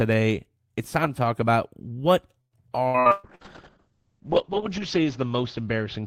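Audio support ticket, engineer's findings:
Choppy, robotic speech 2.41–3.44 s with five dropouts, longest 119 ms. Repeated packet loss in the jitter buffer/decoder path: each lost or late packet concealed by extending the last sound, covering about 38% of that stretch.

Rough, watery, muffled speech from 3.13 s to end, no recovery. Call bitrate drop: bandwidth estimate fell, encoder forced from 40 to 6 kbps, audio band cut from 20 kHz to 8 kHz. Bottom rate held for 1.3 s.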